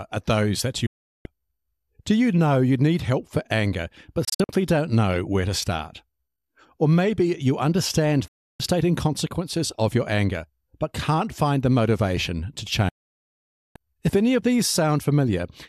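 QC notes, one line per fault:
0.86–1.26 s, 4.25–4.50 s, 8.28–8.60 s, 12.89–13.76 s: digital broadcast dropout. The receiver mutes on lost frames, with quick fades. The 4.25 s gap is scattered short holes.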